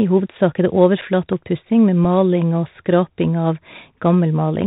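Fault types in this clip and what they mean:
Bluetooth CVSD headset codec: Throughout the speech, a narrowband headset link encodes each sample as a single up-or-down bit at 64 kbps with an adapting step. Nothing above 4 kHz survives, loud high sounds outrun the step and distort, sibilants turn scratchy, and granular hiss sits underneath.
Unconcealed Bluetooth headset packet loss: At 1.01 to 1.03 s, about 7.5 ms of speech drops out, which fits a couple of lost packets, and at 2.04 to 2.05 s a 3.8 ms gap fits one. Each hole has hard edges, with a brief quieter recovery.
Loud pop: At 1.33 to 1.35 s, a single sharp pop lands on top of the speech, peaking a few decibels above it while the speech continues underneath. It is likely caused by a sudden voltage step from a switch, static discharge or driver glitch.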